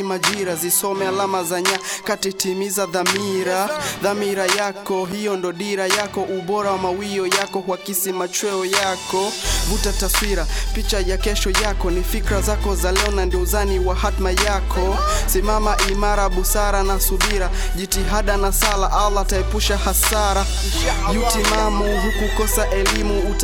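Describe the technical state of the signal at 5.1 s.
Loose connector crackle runs from 5.05 to 5.13 s: a worn contact intermittently breaks the signal path, producing a short, irregular burst of scratchy crackle.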